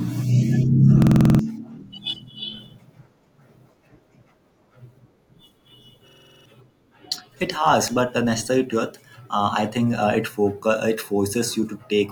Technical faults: system hang loop

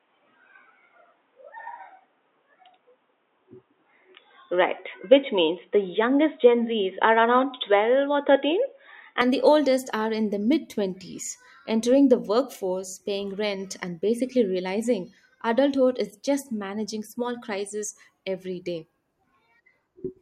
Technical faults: input switched to a poorer device

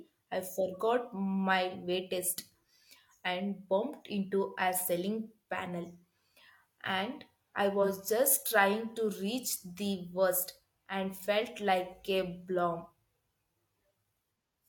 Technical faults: AAC frame loss with concealment; block of digital silence

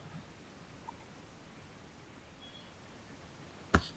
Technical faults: none

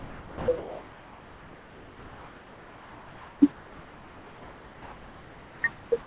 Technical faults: sound dropped by the voice detector

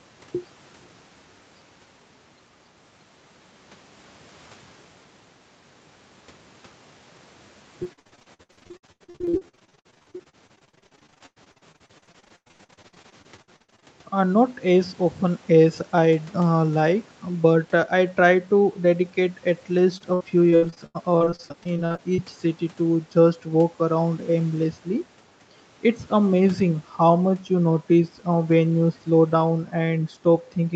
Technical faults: repeated packet loss (robotic sound)

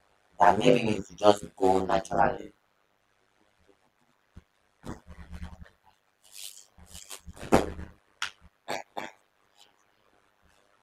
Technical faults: overlap-add ripple

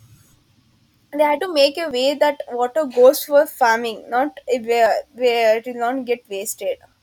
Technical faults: audio missing between chunks

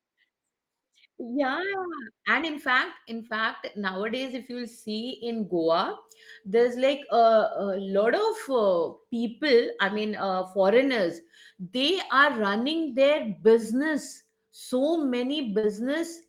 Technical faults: short concealed packet loss

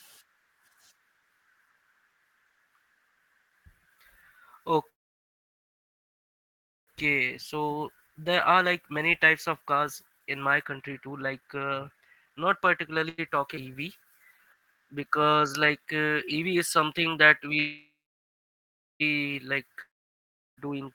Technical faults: call audio freeze; jitter buffer speed-up; short stall from a late packet; skip ahead; jitter buffer slow-down; long network dropout

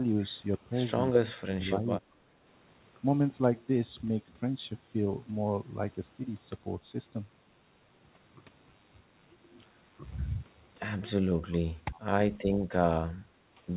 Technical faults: speech suppressed in double talk; echo leak

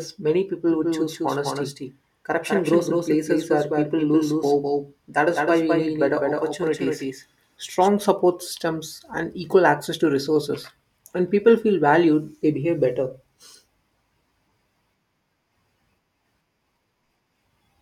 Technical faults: doubled audio track

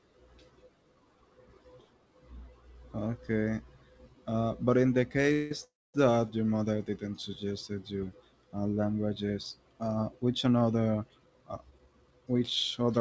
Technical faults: call audio freeze; jitter buffer speed-up

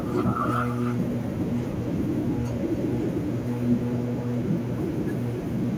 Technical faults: echo with no canceller

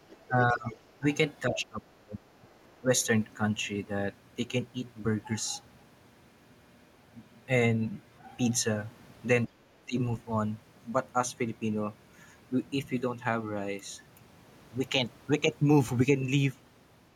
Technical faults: other side's voice leaking through; speech suppressed in double talk; background gated by the echo canceller

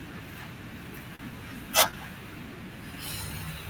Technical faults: short stall from a late packet

